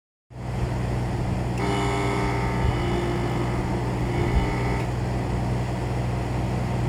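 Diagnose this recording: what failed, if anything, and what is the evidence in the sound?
Nothing failed; no faults heard.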